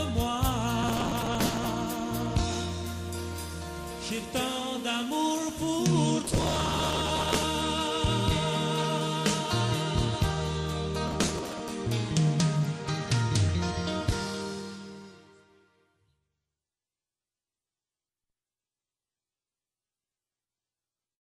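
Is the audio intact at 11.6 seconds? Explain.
No. From 11.08 to 11.69 s there is processor overload crackle: buffers of around 5 ms miss their deadlines dozens of times over that stretch, each refilled with stale audio, giving a gritty tearing. The waveform shows hard-edged steps; the spectrogram, dense broadband vertical streaks.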